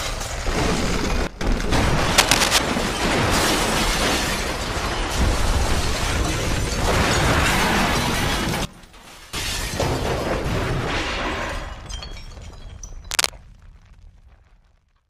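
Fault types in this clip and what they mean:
Sudden gain jump: At 1.27 to 1.41 s the level falls abruptly by about 18 dB, and at 8.65 to 9.33 s by about 19 dB. Each drop and recovery happens from one sample to the next, with no fade. The sound and the background noise fall together and then snap back. The likely cause is a digital gain setting or bit shift applied without any ramp. The first dip lasts about 0.14 s and the second about 0.68 s.
Cable scratch noise: From 2.18 to 2.59 s, dense, uneven bursts of crackle sit over the sound, somewhat louder than the sound itself. A shorter burst at 13.11 to 13.30 s is roughly as loud as the sound. Both are heard as a brief scratching or rustling laid on top of the sound. The likely cause is a worn cable, connector or control being moved, so that its contact resistance fluctuates rapidly and injects noise into the signal.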